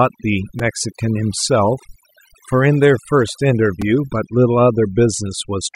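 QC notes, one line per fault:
Throughout: overdone noise removal. Bands near the noise floor are gated off, taking quiet parts of the voice with them and leaving twinkling specks; the spectrogram shows a blank background with scattered isolated dots.
0.59 s and 3.82 s: repeated buffer. A tiny 2.67 ms piece plays three extra times with hard joins, heard as a brief buzz; the waveform shows identical repeated cycles, fitting a 128-sample buffer.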